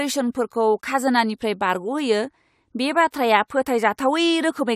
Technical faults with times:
none

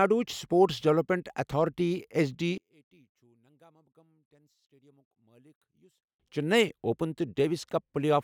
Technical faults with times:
2.58-6.20 one channel inverted

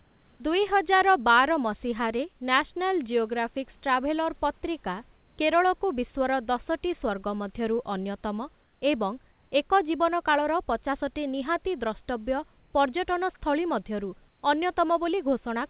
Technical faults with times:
0.00-0.40 comfort noise in place of the background
8.62-8.82 comfort noise in place of the background
12.58-12.74 comfort noise in place of the background
14.28-14.42 comfort noise in place of the background

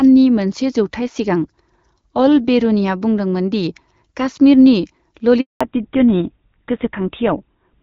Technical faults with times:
5.41-5.61 handover gap
5.61-7.83 fallback to narrowband

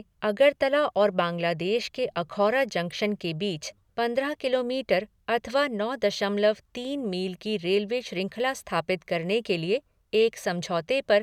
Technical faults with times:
2.90 corrupt frame decoded
10.21 corrupt frame decoded

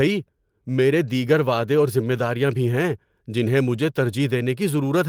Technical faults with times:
1.07-1.09 lost packet rebuilt from error correction
2.17 lost packet rebuilt from error correction

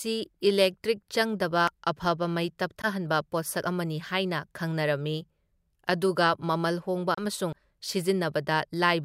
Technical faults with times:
1.68 audio missing between chunks
2.82-2.86 Bluetooth dropout
3.63 audio missing between chunks
7.14-7.21 Bluetooth dropout
7.53 audio missing between chunks

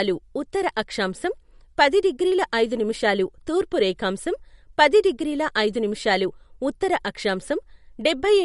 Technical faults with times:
0.00-8.45 MP3 compression

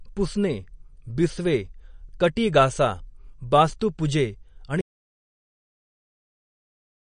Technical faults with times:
0.00-7.01 MP3 compression
4.81-7.01 audio dropout to silence

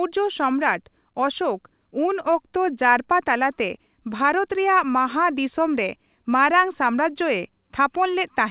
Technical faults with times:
none

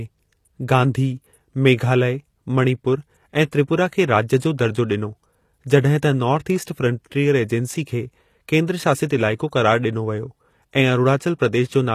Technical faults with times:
0.00-11.94 HE-AAC compression
3.51 pre-echo
9.06-9.10 pre-echo

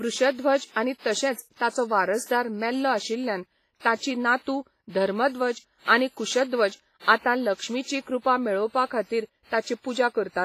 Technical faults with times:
0.00-10.44 WMA compression

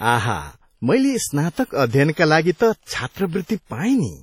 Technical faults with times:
0.00-4.23 WMA compression

